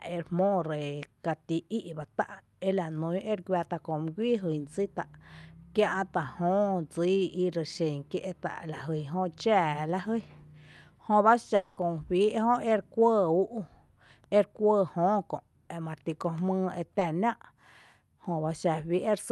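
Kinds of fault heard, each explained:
Long network dropout: From 11.55 to 11.79 s, about 0.22 s of speech is missing, likely because no packets arrived for that stretch. The receiver covers the whole gap by extending the last sound into a fading continuation with no fully silent part, and the speech resumes without the lost piece. A spectrogram shows the last sound's spectrum smeared and losing detail across the gap. The waveform shows a decaying, repetitive envelope rather than a flat line.
Short concealed packet loss: Between 16.99 and 17.03 s, about 20 ms of audio never reached the decoder in time. The receiver filled the hole by continuing the preceding sound and blending it back into the real signal, which is heard as a brief smear or wobble. On a spectrogram it appears as a thin vertical band where the fine structure blurs, still capped near the 12 kHz limit of the Opus call path.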